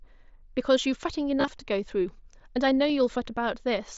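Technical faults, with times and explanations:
1.40 to 1.51 s, concealed Bluetooth headset packet loss: scattered drops totalling about 52 ms, runs up to 22.5 ms, patched with repeated recent waveform, giving brief buzzy fill and warble.
2.89 s, concealed Bluetooth headset packet loss: a single lost packet of about 7.5 ms, bridged by copying the last matching stretch, so it is nearly inaudible.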